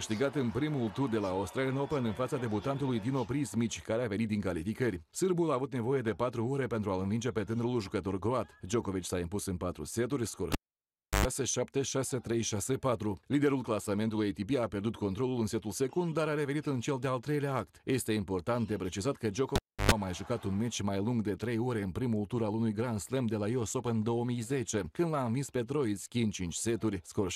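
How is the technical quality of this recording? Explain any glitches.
Two glitches mar the recording, both a cable pulled and plugged in. At 10.52 to 11.26 s and 19.56 to 19.92 s, a live lead is disconnected for 0.68 s and then 0.31 s. Each event starts with a pop and a drop to near silence. While only the plug tip makes contact, about 0.1 s of 50 Hz mains buzz comes through, and a second pop marks the restored connection.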